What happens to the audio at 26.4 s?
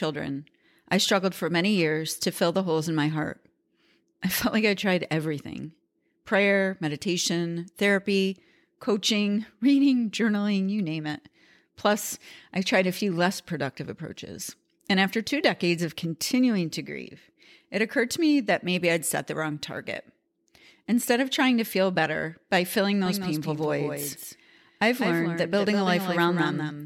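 At 26.4 s a doubled audio track is playing: from 23.06 s to the end, a second full-band copy trails about a fifth of a second behind at a few dB lower level, likely from a duplicate capture path. Unlike an echo, it has no decay or room colour and starts abruptly.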